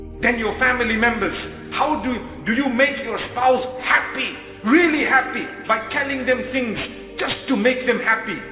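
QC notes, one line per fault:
throughout aliasing: the audio was downsampled without an anti-alias filter, which fits a drop from 44.1 kHz to 8 kHz. Content above the 4 kHz fold mirrors back as unrelated tones roughly 20 dB down, making highs gritty and metallic against the band edge.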